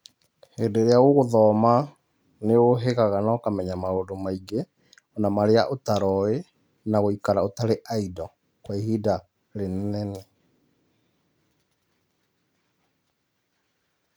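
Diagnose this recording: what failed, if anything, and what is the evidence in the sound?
Nothing in the signal points to a failure at any stage of the chain: the speech keeps continuous timing and level, with no breaks, distortion or interference anywhere in it.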